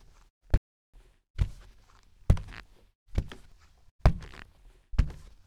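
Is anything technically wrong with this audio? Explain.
Yes. A playback stall runs from 0.58 to 0.94 s: the sound halts abruptly for about 360 ms, likely because the player starved or blocked, a longer gap than a brief dropout.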